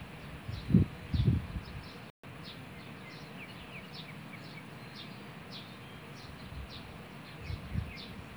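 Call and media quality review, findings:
Audio cuts to silence at 2.10–2.24 s, about 134 ms, then resumes. Playback stall, likely player buffer underrun or blocked output thread.

Hurried audio at normal pitch, 2.24–2.36 s. Time-compressed catch-up: player cuts and cross-fades small pieces to clear the backlog, running at 2× speed.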